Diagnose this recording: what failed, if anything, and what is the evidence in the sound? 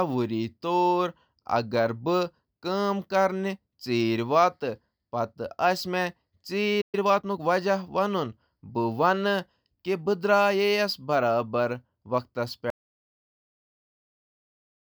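At 6.81 s the speech stops mid-flow and the output goes silent until 6.95 s, a gap of about 120 ms. This is a playback stall at the buffer or playback stage: the player most likely ran dry of data or had its audio thread blocked, so nothing reached the output until it recovered.

From 6.95 s to 7.43 s the speech is hurried, running at 1.25 times normal speed while keeping its natural pitch. This is time-compressed catch-up in the playback stage. After the stall, the player worked through its backlog by cutting out short slices of audio and cross-fading across the joins. That shortens the audio without shifting pitch.

At 12.70 s the speech cuts off mid-flow into total silence that lasts to the end of the recording. No room tone remains, so this is written silence, not a quiet passage. This is an audio dropout to silence at the capture or input stage. The likely cause is that the input was lost, through a disconnected device, a failed link or a mute. 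The recorder kept writing silence, and whatever followed is gone.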